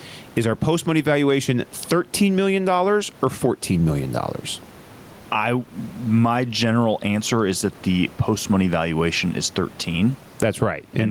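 Speech with gain pumping all the way through: the gain ducks by roughly 10 dB under loud syllables, with room noise sitting about 33 dB under the voice, likely from overdriven gain hitting a fast limiter.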